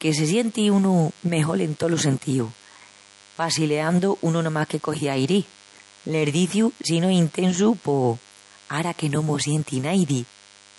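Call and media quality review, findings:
DECT cordless phone buzz, whole clip. Steady, thin 100 Hz buzz, rich in harmonics, roughly 30 dB under the speech. A nearby DECT handset or base bursts every 10 ms. The audio stage rectifies that RF and injects the burst rate.

MP3 compression, likely cause, whole clip. Speech sounds plainly watery and swirly. Nothing above 11.3 kHz. The encoder is starved of bits, consistent with roughly 48 kbps. It cuts the treble at a fixed frequency and switches weak spectral lines on and off between frames.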